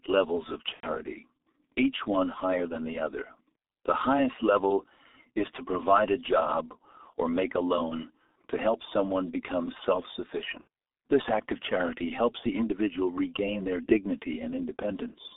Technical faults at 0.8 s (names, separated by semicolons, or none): G.723.1 codec; VoIP packet loss concealed by the speech codec